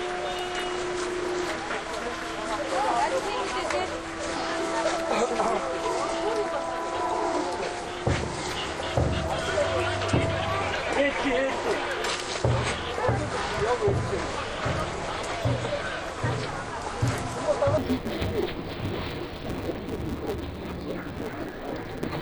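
From 17.78 s to the end at 22.2 s, the audio turns into interleaved audio read as planar. Alternating left and right samples are being split by block, with the first half of each 5.8 ms block, which fits a 256-sample buffer, taken as left and the second half as right. With blocks this short, the sound becomes dull and robotic, carrying a buzz at 172 Hz, the block rate. It has no clear octave drop, unlike the doubled, low, choppy sound that long blocks would give.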